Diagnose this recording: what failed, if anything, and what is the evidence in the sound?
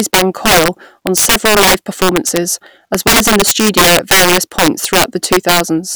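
Integer overflow runs throughout the speech clip. It shows up as harsh, violent cracks on the louder peaks that are far sharper than ordinary clipping would give. The fault sits in the sample-format conversion or integer gain stage. The signal was driven about 12 dB past full scale, and instead of being limited, the samples that exceeded the largest integer wrapped around to the opposite sign. That affects a small fraction of samples, roughly one in twenty, each flipping across the entire range.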